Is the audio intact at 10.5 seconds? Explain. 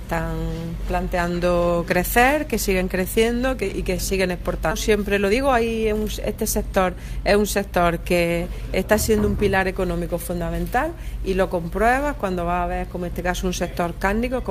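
Yes, the audio is intact at 10.5 seconds, with no dropout, glitch, distortion or other fault there.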